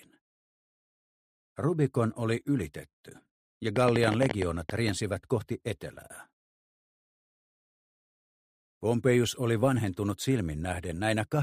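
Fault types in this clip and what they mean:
Train of clicks: a burst of around fifteen similar sharp pulses from 3.76 to 4.90 s, about 11.6 per second at an uneven pace, standing well above the sound. Unlike scattered crackle, the clicks share one shape, likely from electrical interference or a faulty connection or power supply.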